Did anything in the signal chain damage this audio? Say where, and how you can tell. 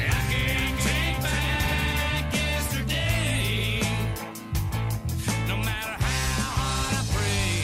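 Yes. A doubled audio track runs until 2.0 s. A dry copy trails by about half a second, about 5 dB quieter, then ends abruptly. Likely a slower second capture path.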